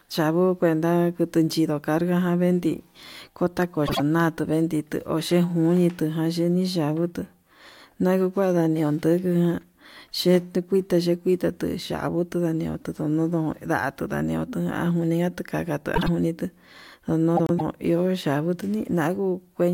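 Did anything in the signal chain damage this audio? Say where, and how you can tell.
Yes, frames out of order, introduced in network transport. The speech garbles into a brief flutter at 3.86–4.00 s, 15.96–16.08 s and 17.37–17.61 s, where adjacent runs of about 52 ms, then 104 ms, play swapped. Unlike packet loss, no time disappears.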